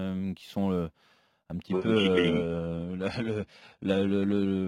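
A speech clip that switches abruptly, from 1.67 s just after "qui sont un", to an adaptive stream at a lower bitrate. Treble above 11.8 kHz vanishes, which fits a fall from 96 kbit/s AAC to 16 kbit/s HE-AAC. Unlike a dropout, no gap occurs.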